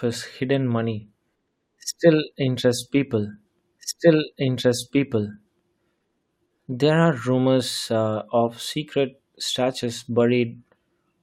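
At 3.78 s the speech jumps back with a small blip, and about 2.0 s of it plays a second time, running to 5.79 s. This is a stream segment repeated: the player fetched or queued the same chunk twice, adding that duplicated stretch.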